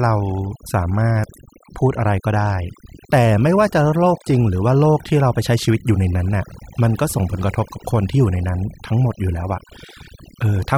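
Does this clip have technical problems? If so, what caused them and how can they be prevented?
Yes: overdone noise removal runs through the whole speech clip. Bands near the noise estimate are pulled down so hard that the background falls to near silence, apart from twinkling specks, and quieter parts of the voice vanish with it. On a spectrogram the gaps look black, scattered with isolated bright dots, and the voice shows ragged, missing patches. Prevent it by setting a gentler reduction amount and checking the result against the original by ear.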